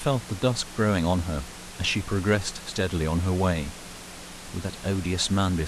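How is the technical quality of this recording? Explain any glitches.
No glitches turn up anywhere in this speech recording, just a bit of the room's own background noise sitting about 16 dB below the talking, which is simply part of where the mic was.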